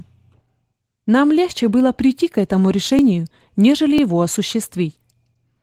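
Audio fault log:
throughout: Opus voice compression. The speech is muffled, slightly hoarse and a little robotic, and the damage is plainly audible. That fits Opus in hybrid mode at a low rate, around 16 kbps. The linear-prediction layer carries the band below 8 kHz and codes the excitation coarsely, while a thin transform layer stretches the response to full band. Too few bits reach either layer to keep the texture of the voice.
1.00 to 4.98 s: periodic USB or driver dropouts. About five brief ticks occur, evenly spaced at roughly one-second intervals (0.998 s apart). Each time, a fraction of the audio, around 2 ms, goes missing. It is skipped, not filled with silence, so the waveform jumps straight from one point to a later one. That abrupt join is heard as a small click, and the strict regularity suggests a background task stalling the bus or driver on a fixed cycle.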